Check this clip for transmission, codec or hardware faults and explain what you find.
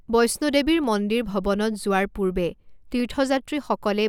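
Two brief clicks in this speech point to dropped samples, at 0.84 s after "বৈষ্ণো দেৱীৰ" and at 3.00 s after "যোৱাৰ পূৰ্বে". A fraction of a millisecond is likely missing each time, so the waveform jumps abruptly, producing a sharp click and a thin vertical spectral line.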